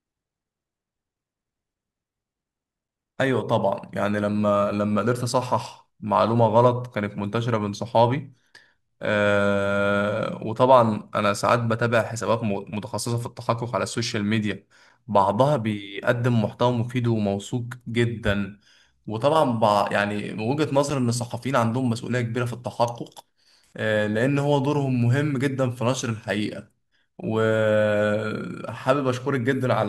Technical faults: gap between chunks

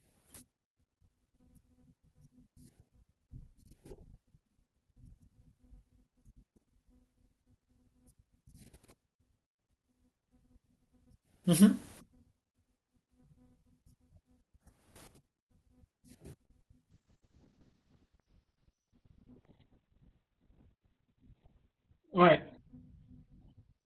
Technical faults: short stall from a late packet; short concealed packet loss; call bitrate drop; jitter buffer speed-up

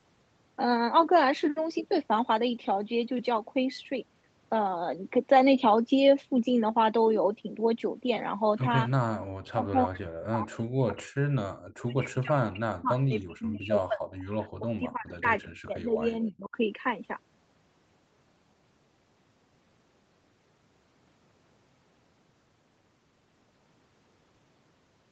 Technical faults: speech suppressed in double talk

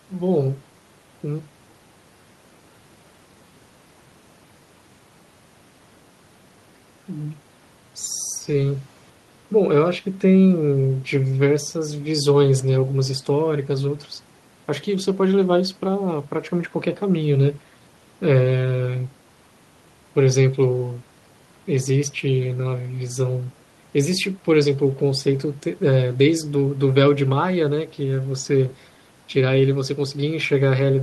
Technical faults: none

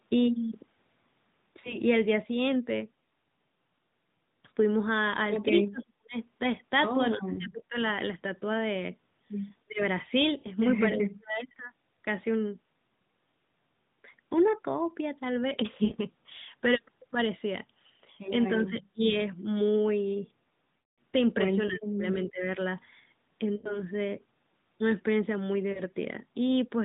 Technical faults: lost AMR speech frames; speech suppressed in double talk

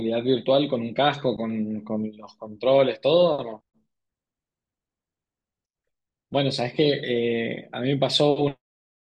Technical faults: none

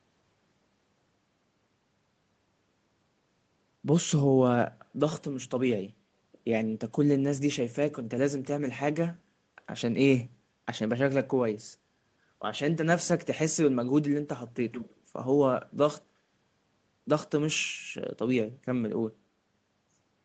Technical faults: echo leak

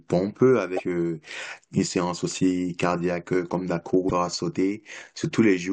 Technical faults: damaged data in a compressed stream

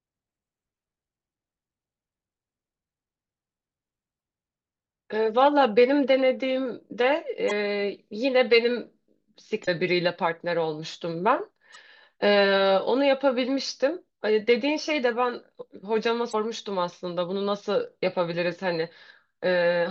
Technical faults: damaged data in a compressed stream

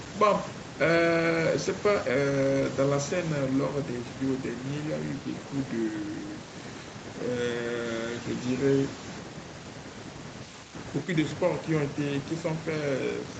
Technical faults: none

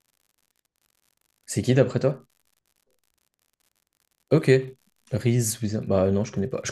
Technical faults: unreliable data bit

